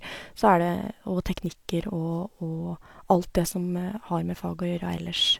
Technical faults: none

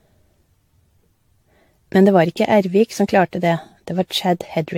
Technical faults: generation loss

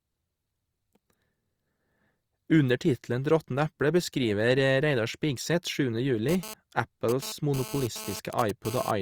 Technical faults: GSM phone buzz

